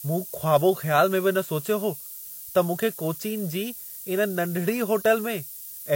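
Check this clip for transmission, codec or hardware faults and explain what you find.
One fault runs through the whole speech recording: low bit depth with noise shaping. The audio sounds like it's been squeezed down to about 6 bits, and the rounding error is pushed up toward the top of the band. You get a steady, thin hiss, bright and climbing with frequency, sitting only about 10 dB under the speech, so it's close to competing with it.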